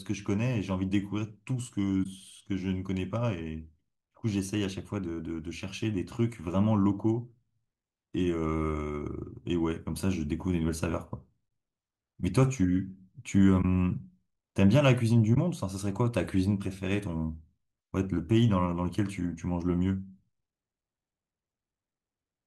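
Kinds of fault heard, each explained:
Corrupt frame concealed: the decoder caught damaged speech frames and smoothed them over, leaving three brief stretches of about 30 ms near 2.03, 13.61 and 15.34 s.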